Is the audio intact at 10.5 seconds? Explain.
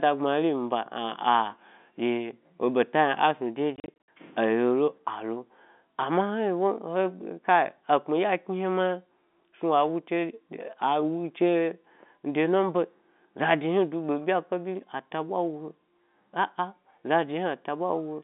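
Yes, the audio is intact at 10.5 seconds, with the speech carried cleanly through the narrow G.711 telephone band.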